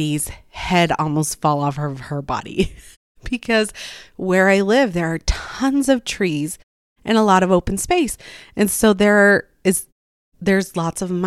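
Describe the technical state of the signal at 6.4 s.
At 6.4 s the speech signal is intact, with no fault present at that moment.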